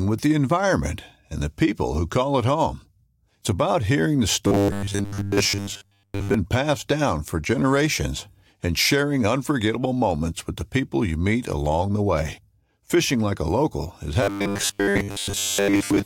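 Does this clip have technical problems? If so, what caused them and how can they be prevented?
Yes. The speech turns into a robotic sound from repeated short buffers twice. It runs from 4.47 to 6.34 s, right after "about hearing the" and before "passed down for generations". It returns at 14.23 s, after "like a local is", and lasts to the end. A rigid metallic buzz at 100 Hz comes in, and the voice follows the original only roughly. This likely comes from audio arriving too slowly, so a 10 ms chunk is repeated while most real audio is dropped. Larger buffers and a steadier network or CPU load prevent it.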